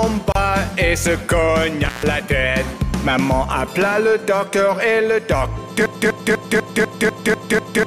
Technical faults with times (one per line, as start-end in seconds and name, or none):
0.32-0.35 gap at a join of encoded pieces
1.85-2.06 intermittent contact
5.86-7.87 broken-record loop